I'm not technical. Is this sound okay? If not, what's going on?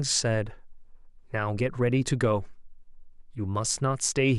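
Yes, this recording sounds okay, with nothing going wrong in it that I can hear. It's a short piece of speech and it comes through as it should.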